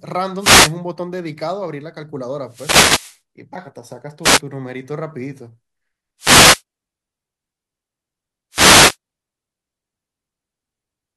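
Five wireless microphone noise hits occur at 0.38–0.74, 2.46–3.20, 4.22–4.41, 6.18–6.62 and 8.51–8.97 s. Each time, the FM radio link fades, receiver hiss surges and swishes over the speech, and the spectrogram shows broadband noise blocks washing across all frequencies.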